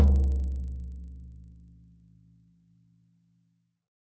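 A recording of sounds, carrying a 25 Hz train of ticks whenever sound is present. This is a resampler restarted on every block: each 40 ms block was converted separately from 24 kHz to 16 kHz, leaving a small error at every block edge.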